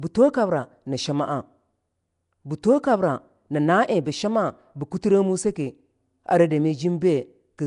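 Right through the speech there's a rough, hissy halo and a smeared, underwater feel, with nothing above 10.6 kHz. That's likely Nellymoser compression, around 44 kbps by the sound: a tight, fixed bit budget per 256-sample block, with starved bands filled by noise.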